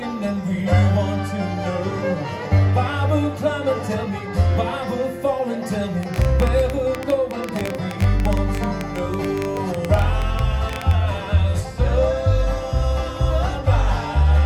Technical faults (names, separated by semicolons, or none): train of clicks